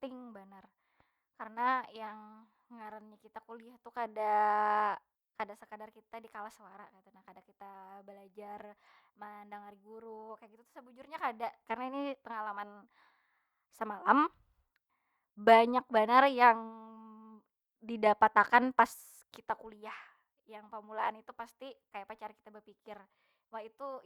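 Listening to the speech recording, nothing technical stood out at any point.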